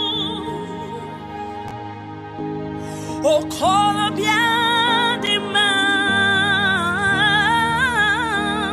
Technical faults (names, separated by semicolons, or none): chunks out of order